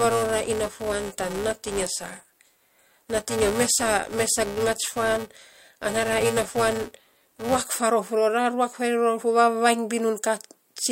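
Speech, with a filter restarted on every block from 0.0 to 7.64 s, causing a level-dependent 345 Hz buzz, which fits 128-sample blocks each starting from silence.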